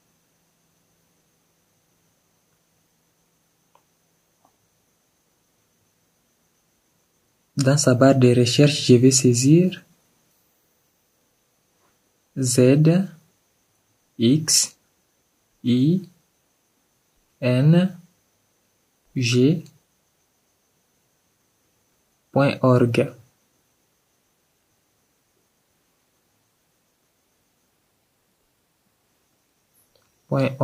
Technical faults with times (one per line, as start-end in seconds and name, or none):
none